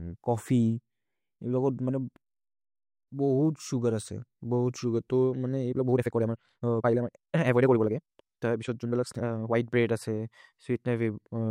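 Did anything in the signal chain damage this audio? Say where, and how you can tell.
Yes. Editing software likely compressed a section to fit a length: a time-stretched section runs from 5.69 to 9.55 s, just after "असे बहुत् सुगर् तो". The speech suddenly moves at 1.91 times its pace with unchanged pitch, sounding rushed as short pieces are dropped.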